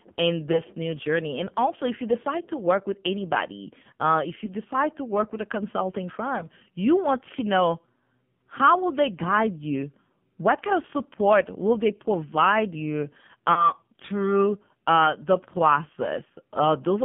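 The whole call runs through AMR narrowband mobile coding, squeezed into roughly 150 Hz to 3.4 kHz with heavy codec damage. The buzzy, synthetic edge on the speech fits a low mode around 5.9 kbps, where the vocal tract model gets very few pulses to work with.

There are lost AMR speech frames at 0.52 to 0.64 s, 4.46 to 4.55 s, 6.38 to 6.47 s and 13.54 to 13.71 s. Each sounds like a single 20 ms frame failing, with the decoder patching over it from the last good settings. You hear a quick dip or warble, then a briefly rough recovery.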